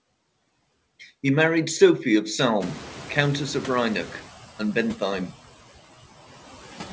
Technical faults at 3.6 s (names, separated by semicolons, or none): noise suppressor artifacts; noise suppressor catching up